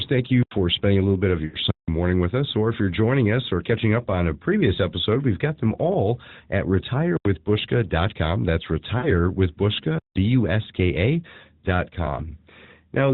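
At 1.46 s and 8.98 s, lost AMR speech frames break into the speech, lasting 80 ms and 60 ms, which fits four and three dropped 20 ms frames. The decoder repeats its last good pitch and vocal-tract settings at falling gain, producing a short, smeared, fading sound.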